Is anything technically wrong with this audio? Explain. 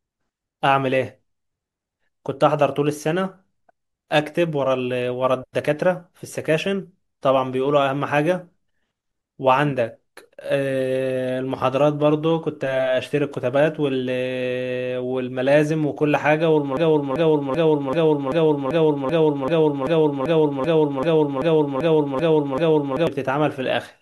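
Yes. From 16.77 to 23.07 s there is a broken-record loop. A 0.39 s fragment of speech repeats 16 times back to back, likely because a stalled player or stream kept resending its last fragment, so the audio for that stretch is lost. The waveform and spectrogram show one identical block tiling every 0.39 s.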